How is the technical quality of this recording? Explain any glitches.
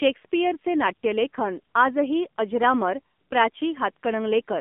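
Technical quality is limited by narrowband mobile coding. Throughout, the AMR narrowband mobile codec confines speech to roughly 200 Hz–3.5 kHz, and its pulse-driven vocal-tract model makes the voice plainly buzzy and synthetic, consistent with a low rate near 7.4 kbps.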